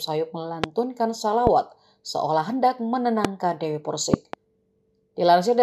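Loud pops land at 0.64–0.66 s, 1.47–1.49 s and 3.25–3.27 s, each a single sharp hit, then a double pop spread over 4.14–4.36 s. They jump out something like 20 dB above the surrounding sound, which keeps running underneath untouched. The likely culprit is a sudden voltage step or spike, from a plug, switch, static or driver glitch, that got added to the signal and was shaped by the downstream circuitry into that thump.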